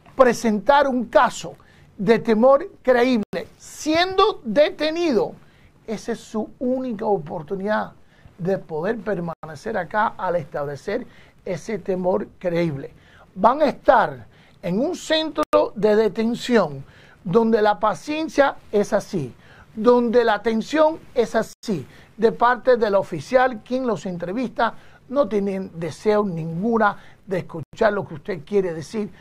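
Gaps between chunks appear at 3.23, 9.33, 15.43, 21.53 and 27.63 s, each a 100 ms hole of silence with abrupt edges. The audio arrives in 6-second chunks, and at every join silence is inserted, so the sound stops dead and restarts a tenth of a second later. Nothing is missing, only pushed back, and the evenly spaced dropouts, 6.1 s apart, give the clip a regular stutter.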